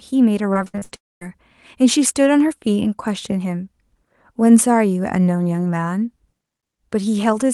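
From 0.53 to 1.25 s the speech turns choppy and robotic from repeated packet loss. Seven short holes, the longest 60 ms, were each patched by stretching the sound just before it, so about a quarter of this span is synthetic fill. On a waveform the envelope shows abrupt steps and repeated, oddly regular cycles. A spectrogram shows smeared, frozen harmonic bands broken by thin vertical seams where real audio resumes.

Overlapping that stretch, from 0.95 to 1.29 s, the audio cuts out in a way most likely caused by a long network dropout. The last sound carries on briefly as a fading buzz, then roughly a quarter of a second of near-silence follows before speech returns with that portion gone. The waveform flattens to a thin line after a short decaying tail. On a spectrogram the energy above the floor empties out, and the band limit near 12 kHz from the Opus call path stays visible on either side of the gap.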